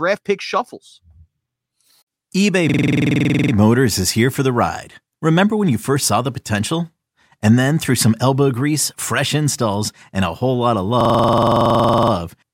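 From 2.69 to 3.53 s, and again from 11.01 to 12.12 s between "a whole lot of" and "you transformed", a system hang loop repeats one 46 ms slice of audio at 21.5 Hz, consistent with a frozen 2048-sample buffer. Unlike a dropout, it produces a rapid, identical stutter rather than silence.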